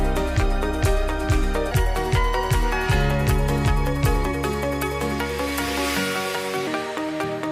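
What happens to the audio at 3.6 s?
At 3.6 s the audio sits inside a section at the wrong speed, running from 1.71 to 6.67 s at 1.21 times normal, likely from playback against a mismatched clock. Everything turns hurried and about three semitones higher, and unlike a pure pitch shift, the timing speeds up along with the pitch.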